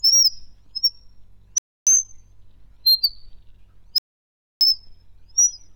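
At 1.58 s the sound drops out for about 0.29 s, then again at 3.98 s for 0.63 s. Likely a Bluetooth stall: the headphone buffer ran dry waiting for resent packets.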